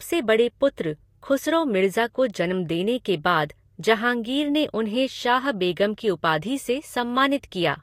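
Speech with low-bitrate audio saved at a high bitrate throughout. Nothing sounds above 16.5 kHz, and earlier coding artefacts remain. This likely comes from a lossy file, near 45 kbit/s, re-encoded as MP3.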